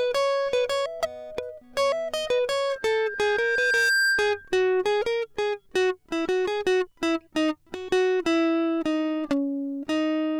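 A music recording with loudspeaker feedback squeal from 2.69 to 4.55 s: a single 1.6 kHz tone swells over about a second to roughly 5 dB above the music. That gradual self-building growth, unlike a steady interfering whistle, marks a microphone-speaker loop.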